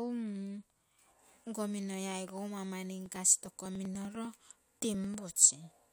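From 3.06 to 5.14 s, after "minoi aigou mau mani", regular ticks recur every 99 ms. These are periodic USB or driver dropouts, each skipping about a millisecond of audio.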